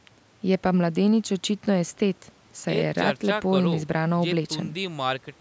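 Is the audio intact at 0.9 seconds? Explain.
Yes, the speech at 0.9 s is intact, with no dropout, click or distortion at that moment, only the normal call microphone processing with its trimmed lowest bass and nothing above 8 kHz.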